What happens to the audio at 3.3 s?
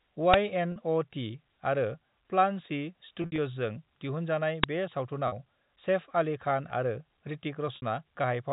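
From 3.22 to 3.38 s there is packet loss with pitch repetition: about 100 ms of audio goes missing in short runs spread over 160 ms, which fits roughly five 20 ms packets. The receiver repeats the last pitch period to fill each gap, producing a brief held, buzzy tone. In the longest 60 ms run, this fades towards quiet. Unlike a plain dropout, the gaps are bridged by that frozen pitch rather than by clean silence.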